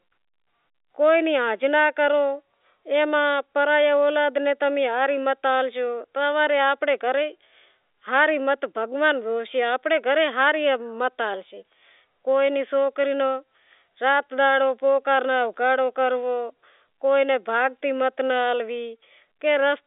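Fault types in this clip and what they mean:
Nothing stood out on listening to this telephone-band speech.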